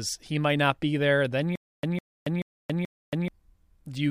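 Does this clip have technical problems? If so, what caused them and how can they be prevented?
Yes. From 1.56 to 3.28 s there's a stutter with silent gaps: a 154 ms burst of speech repeats four times, with 278 ms of dead silence between each. That's likely a stalled stream replaying its last fragment, so the real audio there is lost. A larger playback buffer would prevent it.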